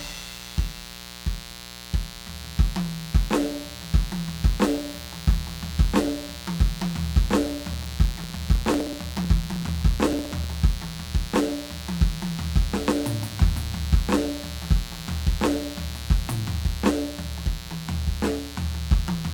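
A mains buzz runs through the whole piece of music, about 15 dB below it. Sharp 60 Hz switching spikes make it raspy, not a smooth hum. From 7.73 to 10.51 s, periodic USB or driver dropouts skip roughly a millisecond of audio every 0.063 s. Their strict regularity marks them apart from random crackle.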